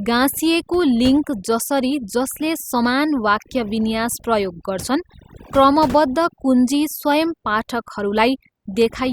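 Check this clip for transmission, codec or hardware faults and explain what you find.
Overdone noise removal is present throughout. An over-aggressive noise reducer cuts bands near its noise estimate, taking quiet speech with them, leaving near-silent, twinkling gaps.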